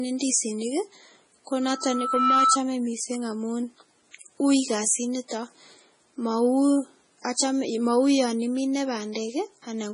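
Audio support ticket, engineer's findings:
Watery, swirly texture across the whole clip, with heavy codec damage: weak components flicker on and off between frames, attacks smeared, nothing above 10.5 kHz. Likely MP3 compression at a low bitrate, which fits about 24 kbps, where the encoder zeroes weak frequency lines when bits run short. On a spectrogram the top is cut flat at 10.5 kHz, with blotchy, patchy holes and isolated islands below that line.

Loudspeaker feedback squeal, 1.61–2.59 s, ending just before "mising amun". A single 1.3 kHz tone swells over roughly 0.7 s to about 5 dB above the signal. Mic is picking up its own loudspeaker, with loop gain above one at 1.3 kHz. On a spectrogram it shows as a lone horizontal line brightening as it rises. On the waveform the envelope grows steadily, then drops when the squeal ends.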